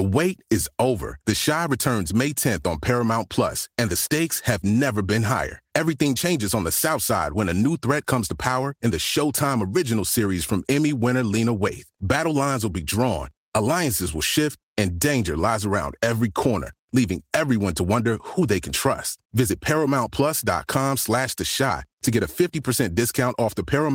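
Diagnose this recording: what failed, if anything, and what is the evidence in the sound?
Nothing failed: there is no evidence in the sound of a fault at any stage of this recording.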